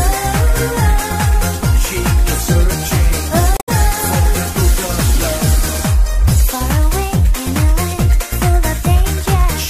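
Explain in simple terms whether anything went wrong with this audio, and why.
Damaged data in a compressed stream, from 3.57 to 3.69 s. Part of the compressed file was corrupted there, so the player couldn't read it, lost its place and searched for the next readable chunk. That stumble comes out as a brief chirp or blip.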